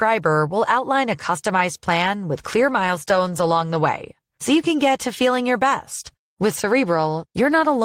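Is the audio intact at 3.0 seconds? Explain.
No, 3.0 s falls inside a call bitrate drop running from 2.34 to 3.85 s. The call's encoder was pushed to code with fewer bits, so the speech turns rough and watery, with the top end dulled, which fits a fall from about 32 to 16 kbps. Unlike packet loss, the sound never breaks up or drops out. It stays continuous, just coarser.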